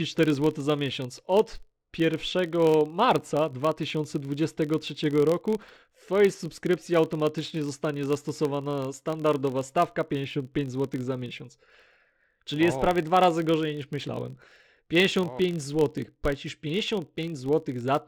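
Filter restarted on every block, throughout the speech: the filter loses its stored state at each block boundary and starts again from silence, leaving a small transient every time. The result is a 43.1 Hz buzz, which fits a 1024-sample block, rising and falling with the speech level.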